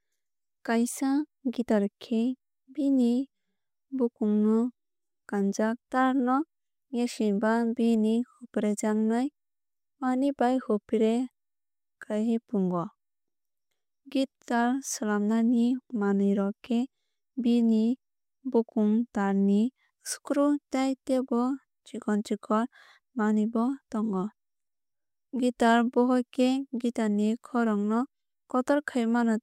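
Nothing technical stands out in this speech recording, so there's no fault to point to here.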